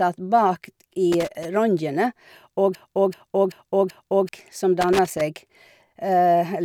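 From 1.12 to 1.45 s there's loose connector crackle, a scratchy, irregular burst where a worn contact keeps breaking and remaking the speech signal. Then, from 2.75 to 4.29 s, a broken-record loop repeats a 0.38 s fragment four times back to back, so the speech in that stretch is lost, most likely a stalled stream resending its last buffer. The crackle returns from 4.81 to 5.21 s.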